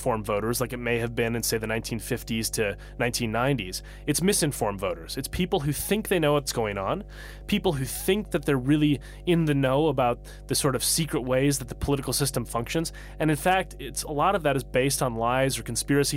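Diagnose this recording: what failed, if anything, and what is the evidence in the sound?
Mains hum in the analogue wiring: a steady 50 Hz tone runs under the speech for the whole clip, fairly prominent, from a ground loop or nearby transformer coupling in.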